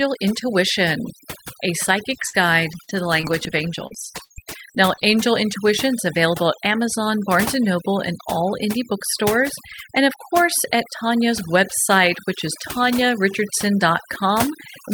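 Overdone noise removal runs throughout: frequency bands near the noise floor are gated away, leaving near-silent gaps speckled with twinkling artefacts, visible as patchy, holed spectrogram texture. From 2.09 to 5.14 s, repeated packet loss (robotic sound) appears: eight gaps, the longest 60 ms, patched by stretching prior audio, giving choppy speech with pieces missing and smeared, repeated waveform segments.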